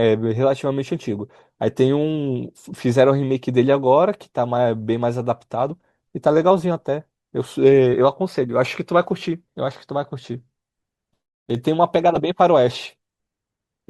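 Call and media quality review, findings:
Corrupt frame decoded, 12.15–12.17 s: brief glitch, lasting about one codec frame. The decoder played a bit-damaged frame, putting energy at wrong frequencies. Unlike packet loss, there is no smeared concealment, and unlike a click it has spectral colour.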